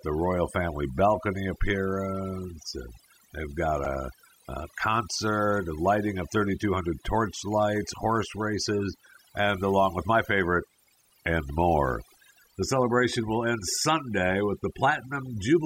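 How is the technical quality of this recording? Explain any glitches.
The technical quality is compromised by two faults: heavy-handed processing across the whole recording, and one brief glitch early on.

Overdone noise removal runs from start to finish. The noise reduction was set far too strong, so any frequency band sitting near its noise estimate gets pulled down or switched off, and the softer parts of the speech are cut along with the hiss. The background drops to near silence dotted with twinkling specks. Unlike a low-bitrate codec, which smears detail evenly, these artefacts track the noise floor and are worst in the quiet passages and pauses.

Damaged data in a compressed stream causes a short blip from 3.85 to 3.88 s. Part of the compressed data there was corrupted, so the decoder misread the affected frames, lost sync and had to hunt for the next valid frame header. The result is a sudden disturbance lasting roughly 30 ms.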